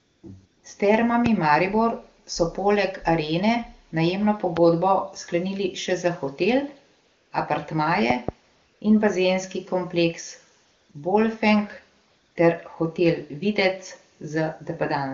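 AMR comfort noise appears from 0.00 to 0.23 s and again from 0.45 to 0.63 s. During these stretches the phone judged the talker silent and stopped sending speech frames for about 180 to 230 ms. The receiver filled each gap with synthetic noise built from a rough sketch of the background's level and spectral shape, so the real room sound is swapped for a smooth, even hiss that switches in and out.

A loud pop lands at 1.26 to 1.28 s and another at 4.57 to 4.59 s. Each is a single sharp click peaking roughly 15 dB above the speech, which carries on beneath it. The likely cause is a sudden voltage step, such as a plug, switch, static discharge or driver glitch, that the following circuitry shaped into a brief pulse.

Comfort noise returns from 7.05 to 7.31 s, replacing 260 ms of sound.

From 8.10 to 8.31 s a pair of pops arrives in quick succession, louder than the earlier ones at roughly 20 dB over the signal, heard as a double thump.

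The AMR comfort noise then recurs from 8.55 to 8.81 s, from 10.65 to 10.89 s, briefly from 10.91 to 10.93 s, and from 12.07 to 12.35 s. Each gap lasts between 20 and 280 ms, and each is filled with the same steady synthetic texture, audibly different from the genuine background on either side. Around these switches, quiet tails and background detail can be clipped away. The AMR wideband (HD Voice) codec itself sounds clean, with speech that fits its top 23.85 kbit/s mode.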